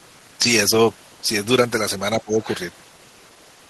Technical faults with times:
2.15-2.42 speech suppressed in double talk
2.42-2.55 other side's voice leaking through

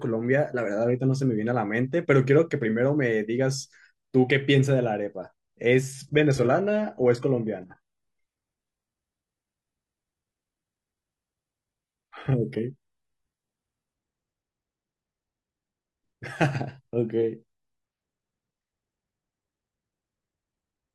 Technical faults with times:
5.94-13.94 adaptive stream at a lower bitrate

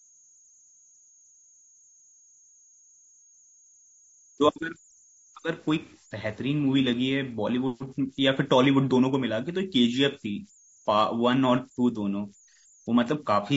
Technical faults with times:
0.00-13.57 converter idle tones
0.00-13.57 low-delay AAC compression
7.88-7.93 AAC frame loss with concealment

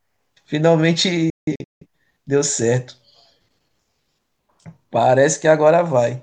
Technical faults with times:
1.30-1.85 digital broadcast dropout

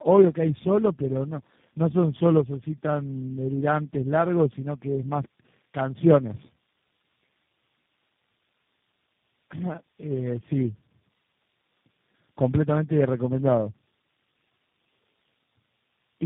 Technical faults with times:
0.00-16.25 tandem speech coding

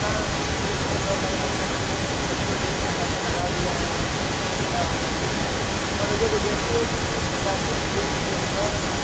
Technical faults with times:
0.00-9.04 echo leak

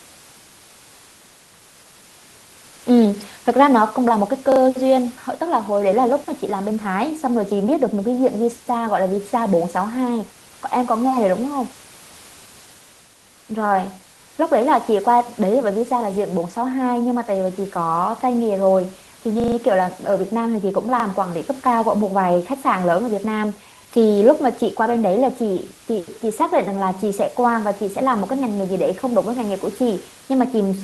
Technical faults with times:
4.52-4.60 repeated buffer
19.40-19.56 repeated buffer
21.00-21.04 repeated buffer

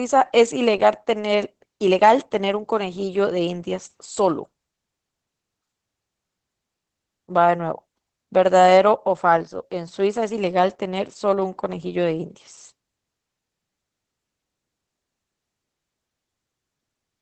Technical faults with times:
0.00-17.21 Opus voice compression

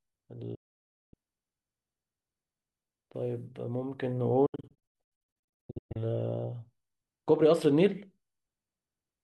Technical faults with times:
0.55-1.14 digital broadcast dropout
4.46-5.96 digital broadcast dropout

